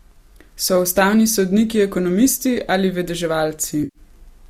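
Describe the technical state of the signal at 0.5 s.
At 0.5 s the speech signal is intact, with no dropout, distortion or other fault at that moment.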